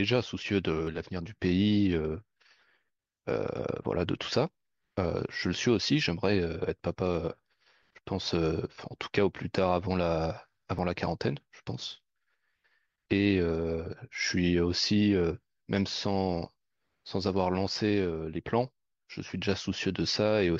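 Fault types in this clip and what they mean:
Overlap between stream segments: overlapping segment time stamps make the player trim sound that was never doubled, so milliseconds vanish and the waveform jumps. Brief skips fall at 0.87, 3.85, 6.83, 8.82 and 10.79 s, on boundaries fitting 1-second segments. Unlike a dropout, no silent gap appears.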